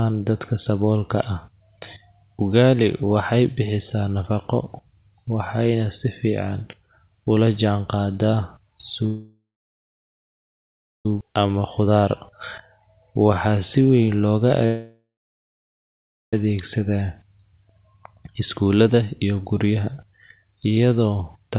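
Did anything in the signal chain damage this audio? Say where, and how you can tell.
Yes, and it's all network and jitter-buffer trouble, not the wiring or converters. The first call audio freeze runs from 9.06 to 11.06 s: the last bit of sound hangs on as a fading buzz, then there's about 1.6 s of silence before things pick up. The second, from 14.66 to 16.34 s, behaves the same way with about 1.3 s of silence. Packets were likely stalled in transit and the buffer ran dry. Each time, playback resumes exactly where it stopped, so the gap adds delay without dropping anything.

Right after the first freeze, at 11.21 s, there's a skip ahead. The sound jumps forward with basically no gap, and about two seconds of material is gone, joined almost seamlessly across the cut. That's the buffer dumping the backlog that piled up during the stall: once the held packets flood in, the receiver throws away the oldest audio to get the delay back down instead of playing it late.

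Then from 11.26 to 11.60 s there's a jitter buffer slow-down. The audio runs at about 86% speed with the pitch unchanged, so sounds are drawn out, adding roughly 57 ms. After the skip the buffer was left thin, so the receiver repeated single pitch periods over and over to rebuild a cushion.

From 18.39 to 20.44 s there's a jitter buffer speed-up at about 108% speed, again at the same pitch, and it sounds a bit hurried. The buffer was holding more than its target, so the receiver snipped out short pitch-period chunks repeatedly, trimming around a fifth of a second. The whole thing stops at 4 kHz, which fits a narrowband call codec like G.711 at 64 kbps.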